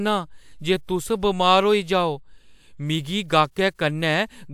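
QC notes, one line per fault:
Nothing stood out on listening to the speech in this clip.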